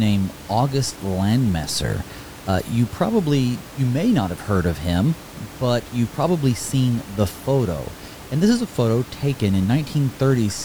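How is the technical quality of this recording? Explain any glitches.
No glitches or faults heard.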